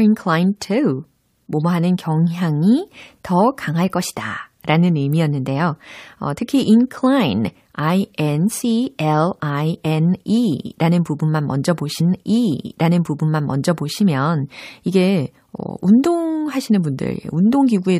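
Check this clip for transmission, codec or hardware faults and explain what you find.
There is one transmission fault, a stream segment repeated. At 11.99 s, right after "라는 부분만 먼저", the speech jumps back and replays about two seconds of what was already heard, running until 13.99 s. The player fetched or queued the same chunk of the stream twice and played it again in sequence. You hear a small blip at the jump, then a word-for-word repeat. Unlike a short stutter or buffer loop, it replays a full two-second stretch.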